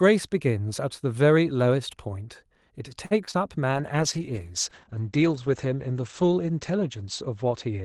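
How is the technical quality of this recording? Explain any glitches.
The recording has a cluster of network glitches over the opus call path in the middle, then a lasting drop in quality to the end.

Short stall from a late packet, 3.05 to 3.13 s: a packet arrived late and the jitter buffer ran dry. The receiver held the last sound for about 54 ms, then resumed where it left off. Nothing is lost, but that moment is stretched with a faint buzzy hold, and the delay grows by 54 ms.

Short concealed packet loss, 3.25 to 3.29 s and 3.31 to 3.35 s: each time about 20 ms of audio never reached the decoder, so the receiver extrapolated from the preceding sound and crossfaded back. The result is two quick smears close together, where a brief consonant can disappear.

Call bitrate drop, from 3.73 s to the end: the bandwidth estimate fell, and Opus was pushed from 32 kbps down to 10 kbps, holding the lowest rate for about 2.7 s. 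Coarser coding makes the speech rough and watery, and the audio bandwidth narrows from 12 kHz to 8 kHz, so it sounds duller and more muffled.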